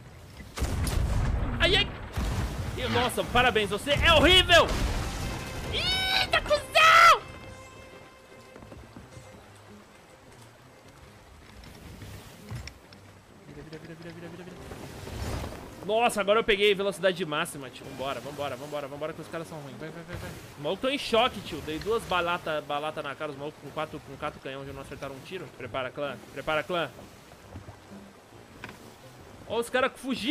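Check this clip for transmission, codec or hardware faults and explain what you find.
Nothing wrong found on the transmission, codec or hardware side; the audio is continuous and stable throughout, with no audible defects to report.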